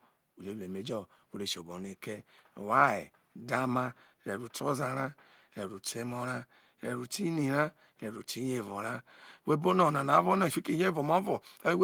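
No technical faults are audible anywhere in the recording.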